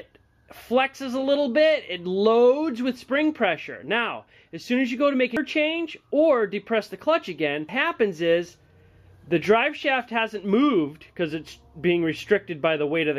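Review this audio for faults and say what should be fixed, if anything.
Two brief glitches at 5.37 s and 7.69 s come from damaged data in the compressed stream. At each point the bytes feeding the decoder were lost or corrupted, so it misread the frame, lost sync and hunted for the next valid header. On a spectrogram each shows as a narrow vertical smear of broadband or oddly tonal energy. The waveform has an abrupt discontinuity there. Preventing it means re-fetching the file intact and verifying it with a checksum before decoding.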